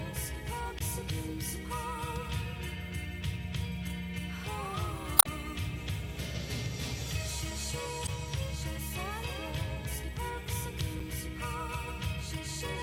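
Around 0.79 to 0.81 s, 5.16 to 5.27 s, 8.05 to 8.09 s and at 11.00 s you get short glitches from damaged data in the compressed stream. Corrupted frames throw the decoder off sync, so it spits garbage until it finds the next header.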